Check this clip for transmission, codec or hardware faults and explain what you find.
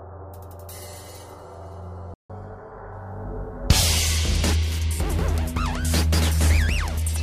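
Two related faults occur in the audio: a playback stall followed by catch-up at higher speed.

From 2.14 to 2.30 s there is a playback stall. The player most likely ran short of buffered data or had its output thread blocked, so the sound cuts to silence for about 0.16 s in mid-flow and then resumes.

From 2.30 to 3.86 s comes catch-up at higher speed. To recover the lost time, the player resamples its backlog and plays it 1.1 times faster. Pitch rises with the speed, by roughly one and a half semitones.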